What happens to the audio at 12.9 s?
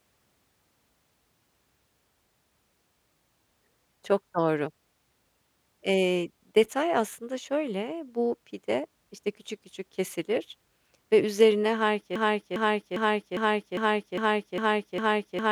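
A broken-record loop runs from 12.16 s to the end: the same 0.40 s fragment of speech repeats back to back, eight times. The stream likely stalled and kept resending its last held fragment, so the speech that should have followed is lost.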